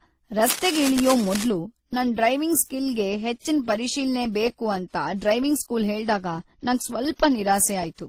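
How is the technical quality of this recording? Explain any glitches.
The recording is compromised by two faults: layered lossy-codec artefacts throughout the speech, and a scratchy burst near the start.

Throughout, the speech carries mixed, smeary compression artefacts, likely from transcoding between lossy codecs, WMA then Opus, fitting roughly 48 then 24 kbit/s. A spectrogram shows blurred detail and nothing above 20.1 kHz.

From 0.43 to 1.45 s, just before "ನನ್ ಡ್ರೈವಿಂಗ್ ಸ್ಕಿಲ್ ಗೆ", rustling cable scratch noise sits about 10 dB below the speech, likely from a worn connector moving. The waveform shows dense, jagged bursts.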